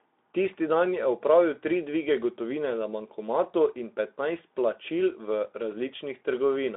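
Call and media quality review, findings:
No faults found.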